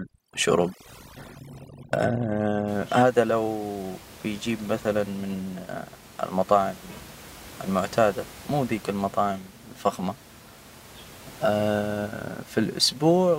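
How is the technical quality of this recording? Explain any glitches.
Overdone noise removal affects the opening, from 0.0 to 2.68 s. The background collapses to near silence dotted with twinkling specks. A noise reduction stage set too aggressively is cutting individual frequency bands whenever they sit close to its noise estimate, taking the quieter parts of the speech along with the noise. After that stretch, the room noise sits at about 21 dB below the speech.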